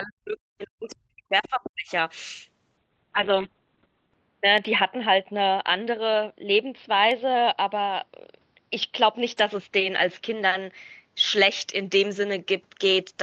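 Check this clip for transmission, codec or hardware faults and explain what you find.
Three faults are audible, all typical of a voice call.

From 0.0 to 1.91 s, the speech is pushed down hard, by roughly 40 dB at its deepest. This is likely speech suppressed in double talk. The echo canceller couldn't separate the talker from loudspeaker echo and attenuated both.

At 1.44 to 1.49 s, a faint second voice appears, roughly 20 dB below the speech. This is likely the other side's voice leaking through after echo cancellation left a residue.

From 2.78 s to the end, the sound turns rough and muffled. Its bandwidth narrows from 8 kHz to 4 kHz. This is a call bitrate drop, which points to Opus falling from about 32 kbps to about 6 kbps. It stays at its worst for 1.35 s.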